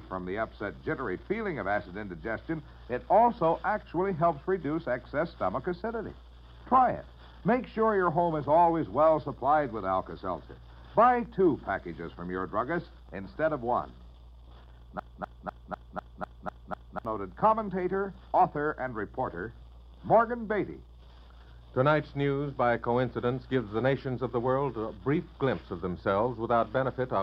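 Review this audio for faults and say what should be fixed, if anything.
There's a broken-record loop from 14.99 s to 17.05 s: a fragment about 0.25 s long plays eight times back to back, identical each pass, so it stutters like a stuck record for roughly two seconds. Whatever should have played in that stretch is simply gone. The likely cause is the player or stream stalling and resending the last chunk it had buffered until fresh data arrived. To prevent it, give the playback or streaming path enough buffer headroom and have it output silence or drop out cleanly on an underrun instead of replaying stale data.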